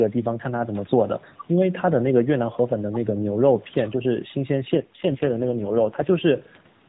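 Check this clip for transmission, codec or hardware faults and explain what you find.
One fault turns up, an AMR rate drop from 4.74 s to 6.16 s. Across that stretch the speech grows rougher, buzzier and more synthetic. The band stays the same and nothing drops out. Detail returns at 6.16 s. The network asked the AMR narrowband speech codec to step down its rate and spend the freed bits on error protection, so fewer pulses describe each frame. The coarseness fits a fall from 12.2 kbps to about 4.75 kbps.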